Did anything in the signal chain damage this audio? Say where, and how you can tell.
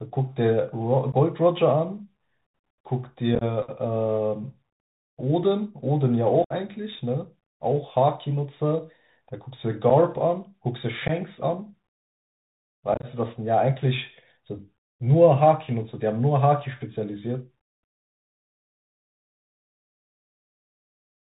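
Yes. At the codec stage, a Bluetooth CVSD headset codec runs throughout. Its one-bit delta steps leave nothing above 4 kHz, with scratchy s sounds and granular hiss, unlike a clean low-pass filter.

On the headset radio link there is unconcealed Bluetooth headset packet loss at 1.12–1.15, 3.35–3.43, 6.44–6.53, 9.90, 11.08–11.11 and 12.94–13.06 s. Silence or an idle pattern fills the holes abruptly, whereas concealment would smooth them over.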